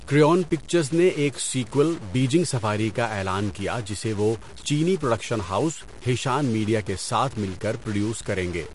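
From start to end, the speech carries a stuck bit. The likely cause is one data bit held at a fixed value by a broken line or converter. About half the samples are off by that bit's weight, adding distortion, and the pauses fill with noise instead of falling silent.

Throughout, MP3 compression damage is plainly audible. Nothing remains above 11.2 kHz, which fits a likely low bitrate around 48 kbps. Weak frequency lines switch on and off between frames, giving a watery, swirly texture, and attacks are smeared.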